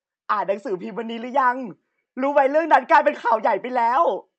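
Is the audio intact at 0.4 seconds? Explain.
Yes, the audio is intact at 0.4 seconds, with no fault at that moment.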